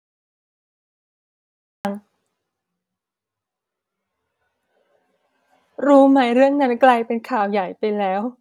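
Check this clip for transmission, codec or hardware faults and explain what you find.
One fault is present, a cut-off start. The clip holds digital silence until 1.85 s. Speech then begins abruptly mid-sound, because capture started late, with no natural attack.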